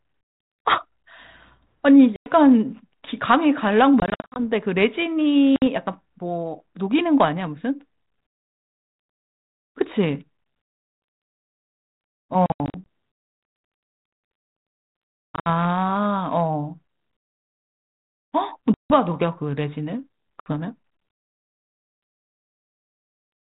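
Packet loss on an ADPCM call at 2.16, 4.0, 5.56, 12.46, 15.31, 18.74 and 20.4 s leaves hard-edged silent holes. The decoder's adaptive predictor and step size then drift from the sender's, so speech returns slightly distorted before settling.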